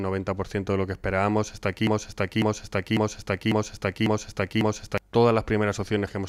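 From 1.87 s to 4.98 s the audio falls into a broken-record loop: a 0.55 s fragment repeats exactly, back to back, six times. The likely cause is a stalled player or stream resending its last buffered piece, so the intended audio for that span is lost.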